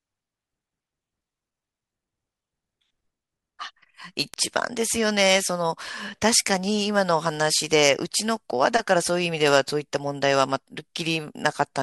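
A flipped bit in the sample data, a bit error spike, corrupts the speech twice. At 4.34 s two consecutive samples jump by a power of two and snap back, peaking at about -11 dBFS. At 9.48 s a single sample does the same, reaching about -4 dBFS. Each is heard as one sharp, broadband tick that has nothing to do with the surrounding sound, and the second is noticeably louder.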